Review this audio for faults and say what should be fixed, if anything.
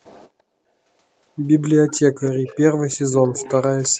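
Faint delayed repeats of the speech appear at 1.87–2.0, 2.24–2.59, 2.9–3.62 and 3.8–3.89 s. This is an echo leak trailing the voice by 344 ms at roughly 20 dB down, with the last one nearer 25 dB down. It is likely a far-end loudspeaker whose echo canceller let residue through. On a spectrogram, weaker copies of the speech bands sit shifted about a third of a second later. On the waveform, they show as low-level bursts. Stronger far-end echo cancellation, or headphones on that side, would prevent it.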